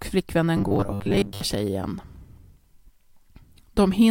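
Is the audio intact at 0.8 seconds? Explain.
No. From 0.57 to 1.41 s there is robotic sound from repeated short buffers, likely from audio arriving too seldom, so roughly 10 ms chunks loop and most real audio is skipped. A rigid 100 Hz metallic buzz results, visible as evenly spaced horizontal spectrogram lines and identical repeating waveform cycles.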